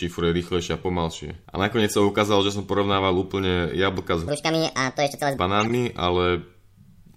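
A short chirp cuts into the speech from 1.79 to 1.82 s, and a longer burst of squeaky noise follows from 5.58 to 5.75 s. Both are corrupt frames decoded: flipped bits in a couple of compressed frames, then in several, were played anyway, so misread gains and codes scattered energy across the wrong frequencies.

Between 4.28 and 5.37 s the voice turns hurried and high, running 1.56 times too fast and sitting around seven semitones sharp. This section at the wrong speed is likely the result of playing that stretch against the wrong clock, which shifts tempo and pitch together.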